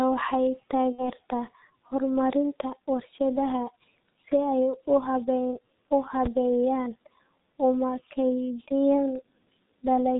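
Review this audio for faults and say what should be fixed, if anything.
The whole clip runs through a G.723.1 codec at about 6.3 kbit/s, and the damage is heavy. Nothing above 4 kHz survives, the voice comes out muffled and hoarse, and consonants smear because the model only updates every 30 ms. A wideband or higher-rate codec would fix this.

From 0.92 to 1.08 s there's VoIP packet loss concealed by the speech codec. Two frames, roughly 60 ms, went missing. The decoder stretched its last pitch into a fading buzz, and the voice stays weak briefly afterwards. A jitter buffer or FEC on the link would help.

At 9.16 s, just after "una kaydiyaan", a single loud pop lands on top of the speech, peaking about 5 dB above it, likely from a plug, switch or driver glitch. Securing connectors and muting before switching should prevent it.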